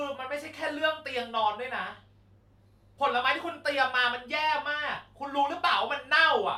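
A speech recording, and nothing is technically wrong with it.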